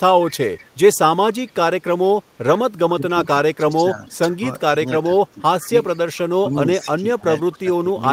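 A faint, delayed copy of the speech trails behind it from 0.26 to 0.66 s, sitting roughly 25 dB under the direct sound and arriving 443 ms late. A much weaker scrap, around 35 dB down, flickers at 1.47 to 1.52 s. This is an echo leak: the far end is likely playing the call over a loudspeaker, and its echo canceller let part of that pickup slip back down the line.

Between 2.89 and 5.72 s the speech repeatedly sags and thins, falling by as much as roughly 15 dB in pieces that add up to about a second. This is speech suppressed in double talk, likely caused by both sides talking at once, so that the echo canceller mistook the talker for loudspeaker echo and pulled the level down.

Overlapping the end of that stretch, the 443 ms echo returns from 5.6 to 5.97 s, again about 25 dB below the speech. From 6.43 to 8.0 s the same double-talk suppression recurs, with dips of up to around 15 dB totalling roughly a second.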